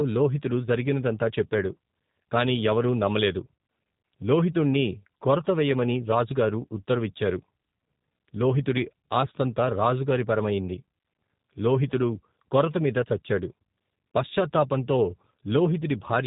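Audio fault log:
Throughout: G.729 codec. The speech is rebuilt from a vocal tract filter and a few pulses per frame, so it sounds rough and synthetic, with nothing above 4 kHz, which fits an 8 kbit/s stream.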